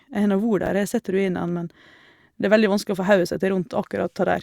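At 0.63 to 0.67 s, chunks out of order: one 10 ms chunk arrives three chunks late and plays after its successors, so the speech briefly jumbles. The waveform shows three hard discontinuities; the spectrogram shows thin vertical broadband lines at the joins.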